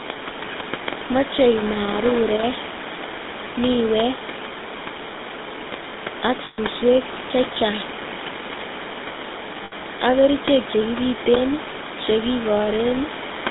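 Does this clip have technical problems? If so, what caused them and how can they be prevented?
Yes. The speech passed through the GSM full-rate codec, which fits a 13 kbps rate. It models the vocal tract and drives it with sparse, regularly spaced pulses, and the line carries only about 200 Hz to 3.7 kHz. As a result, the speech sounds plainly buzzy, gravelly and narrow throughout. A wideband codec such as AMR-WB or Opus would prevent this.

Lost GSM frames occur from 6.44 to 6.59 s, lasting 140 ms, and from 9.64 to 9.73 s, lasting 80 ms, just before "ak kerichek". In each gap the decoder repeated the last good frame's settings, so the sound hangs as a rough, metallic ring instead of cutting out. A more reliable radio link or added error protection would prevent these losses.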